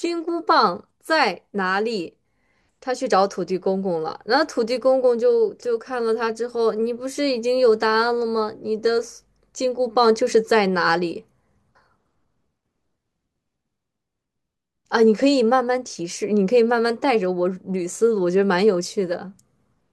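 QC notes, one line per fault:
Nothing to flag here: the speech comes across without any technical faults worth noting.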